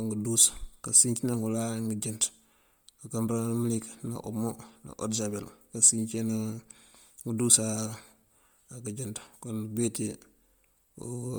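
From start to finish the speech has a breathy, grainy edge. The upper frequencies sound hazy and noisy rather than detailed, even though the band reaches up to about 20.1 kHz. The damage is heavy throughout. The likely cause is Bluetooth LC3 compression. With too few bits, this LE Audio transform codec discards much of the high-frequency detail and fills the gaps with shaped noise. The coarseness fits a bitrate near 32 kbps with 10 ms frames.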